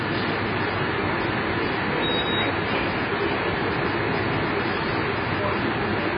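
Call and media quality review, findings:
Dull, band-limited sound for the whole clip, with a warbling, fizzy texture on sustained sounds. Heavy codec damage, likely AAC compression (AAC-LC) at a very low bitrate, which fits about 16 kbps. The encoder starved the upper bands, quantising coarsely and dropping detail. Spectrogram: hard ceiling with nothing above 5 kHz, patchy holes or noise-filled bands and smeared blocks below it.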